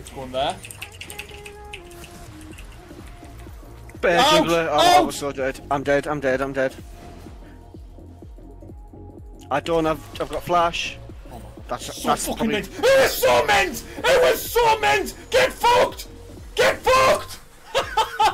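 No technical faults are audible.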